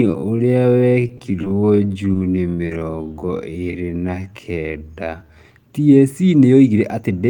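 From 0.0 to 5.36 s the speech drags at roughly half pace (0.52x) yet keeps its pitch, likely a time-stretched section; spectrograms show harmonics at normal height but horizontally elongated, with repeated grains.

Between 1.07 and 2.70 s, about five scattered short gaps, none much over 20 ms, are patched by extending the preceding sound, causing brief ticks and smears; waveforms show brief flattened or duplicated cycles.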